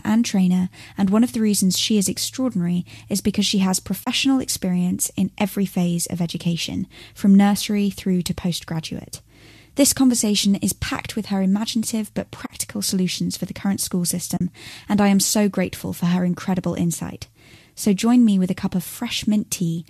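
At 4.04 s, 12.46 s and 14.37 s, AAC frame loss with muting zeroes lost frames, leaving soft-edged holes of 30, 40 and 40 ms.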